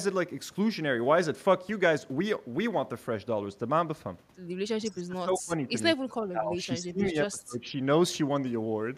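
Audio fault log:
4.78–5.74 s, speech suppressed in double talk: the speech dips sharply, by roughly 25 dB at worst, across most of this span. This is likely an echo canceller turning down the near talker while the far side also spoke.
6.31–7.80 s, speech suppressed in double talk: a second run of drops, up to roughly 20 dB, cuts into the speech for about a second in total, likely as the canceller again turns the near talker down along with the echo.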